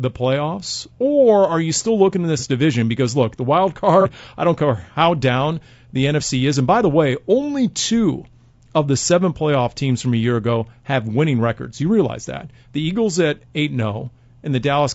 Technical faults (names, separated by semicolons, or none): low-delay AAC compression; AAC frame loss with concealment